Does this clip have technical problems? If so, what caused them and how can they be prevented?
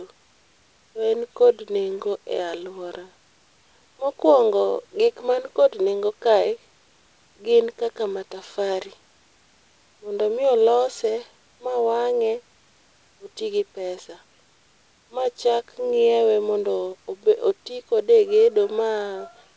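No, this speech clip has no technical problems to trace back or prevent. Nothing is heard above 8 kHz, which fits a wideband call codec such as G.722, and the room noise sits about 41 dB below the speech.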